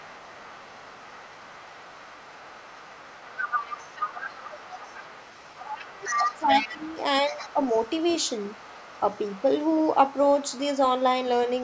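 Other side's voice leaking through runs from 0.0 to 6.41 s in this speech recording, then returns at 6.58–6.98, 7.3–9.44, 9.63–9.95, 10.11–10.66 and 11.48–11.63 s. A second voice sits roughly 15 dB under the talker at first, rises to about 10 dB under near 6.6 s, then fades to a faint residue. This is likely loudspeaker echo the canceller left in the microphone signal. Speech suppressed in double talk follows at 5.9–7.04 s and 7.32–7.57 s. While both sides talk, the talker's level dips by about 10 dB and then about 5 dB, likely as the canceller turns down everything it cannot separate from its own echo.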